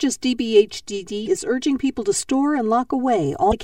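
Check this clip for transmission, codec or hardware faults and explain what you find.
Two faults are present in this speech clip.

Channel delay (comb filtering) runs throughout: one channel lags by roughly 3 ms, and summing to mono cancels evenly spaced frequencies from around 200 Hz, leaving a hollow, phasey sound.

Damaged data in a compressed stream hits at 1.24–1.28 s and 3.49–3.53 s: corrupted frames throw the decoder out of sync, producing brief glitches.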